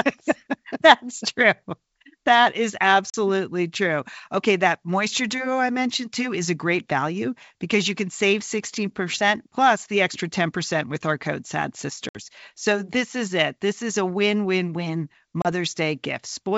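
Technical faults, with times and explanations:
3.10–3.15 s, 12.09–12.16 s and 15.42–15.48 s (after "a win win win"): packet loss on an ADPCM call. About 40, 60 and 30 ms of the G.722 stream drop out as hard silent gaps. The decoder's predictor and step size then mistrack, so the speech resumes slightly distorted before settling.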